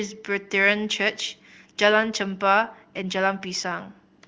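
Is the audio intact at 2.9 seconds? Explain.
Yes, the audio is intact at 2.9 seconds, with no dropout, click or distortion at that point.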